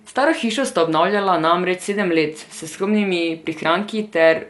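From start to finish the speech sounds dull, with nothing above 11.5 kHz and a rough, fluttering noise clinging around tonal parts. That hiss-like fill, rather than MP3's swirly dropouts, marks Dolby Digital compression, likely at a low rate near 64 kbps.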